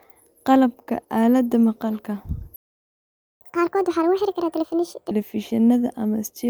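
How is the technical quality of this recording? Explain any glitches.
The recording has two linked playback faults: a stall followed by a sped-up catch-up.

Playback stall, 2.56 to 3.41 s: the player most likely ran out of buffered data or had its thread blocked just after "aalada maqalka", so nothing reached the output for about 0.85 s. The speech cuts off mid-flow into dead silence, then resumes.

Catch-up at higher speed, 3.41 to 5.11 s: to recover the lost time, the player resampled its backlog at 1.5 times normal speed. Because resampling shifts speed and pitch together, the speech runs fast and sounds raised by around seven semitones, then drops back to normal pace and pitch.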